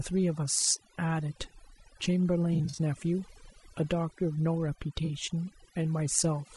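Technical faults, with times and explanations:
throughout: Overdone noise removal. The background is near silent apart from twinkling specks. A noise reducer set far too strong pulls individual frequency bands down whenever they sit near its noise estimate, taking quieter speech detail with them.
throughout: Low-delay AAC compression. The speech is plainly rough and grainy, with noise filling the gaps between harmonics and an artificial-sounding top band. This likely comes from AAC-ELD at a low bitrate, around 32 kbps, whose short frames resolve pitch harmonics poorly.
2.53–2.79 s and 5.05–5.10 s: AAC frame loss with concealment. Brief smeared, noisy, phasey patches. The first is about 120 ms of loss scattered across about 240 ms in short gaps. The second is 40 ms of loss. The decoder rebuilt the missing audio from the last good spectrum.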